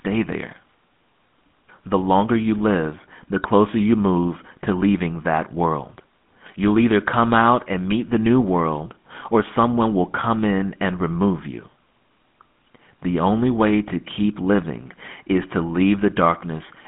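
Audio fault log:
Throughout: GSM full-rate codec, buzzy gravelly speech from coarse pulse excitation, likely around 13 kbps; spectrogram shows a 150 Hz to 3.5 kHz band, nothing above 3.8 kHz.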